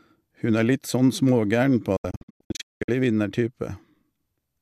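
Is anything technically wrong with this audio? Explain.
Yes. From 1.96 to 2.89 s, a digital broadcast dropout: the receiver muted failed frames, leaving 8 ms fades into several silent holes, the longest 192 ms, totalling about 624 ms of lost speech.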